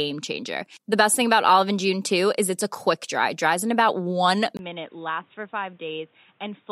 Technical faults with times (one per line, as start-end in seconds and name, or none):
4.57-6.71 input switched to a poorer device